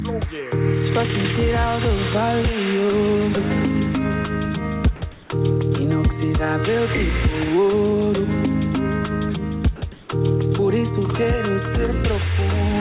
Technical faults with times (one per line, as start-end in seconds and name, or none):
4.96-5.02 sound dropped by the voice detector
5.12-5.30 comfort noise in place of the background
9.76-9.82 sound dropped by the voice detector
9.92-10.08 comfort noise in place of the background